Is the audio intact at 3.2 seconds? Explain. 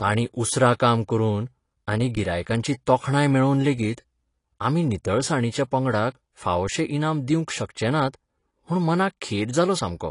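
No. At 3.2 seconds, as across the whole clip, the speech is dull and smeared with a fizzy, warbling texture on sibilants, likely from AAC compression at a low bitrate near 32 kbps. The encoder's lowered cut-off blanks the top band, so a spectrogram shows nothing above about 10.5 kHz.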